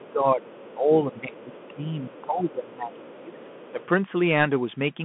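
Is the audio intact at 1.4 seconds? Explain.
No. At 1.4 s the speech falls within a stretch of suppression from the start to 3.82 s that pulls the level down by up to roughly 15 dB. This is speech suppressed in double talk, likely because the echo canceller couldn't separate the talker from loudspeaker echo while both sides spoke, so it turned everything down.

Under that, from 1.12 to 1.75 s, a faint second voice sits about 25 dB below the speech: the other side's voice leaking through. It likely comes from the far end playing over the device's loudspeaker, with the echo canceller failing to strip all of it from the microphone.

Throughout, including this moment, the sound is narrowband and grainy, with nothing above 3.8 kHz, scratchy sibilants and a granular hiss, which fits the Bluetooth CVSD headset codec at 64 kbps. Its one-bit up-or-down steps can't keep pace with loud high-frequency sound.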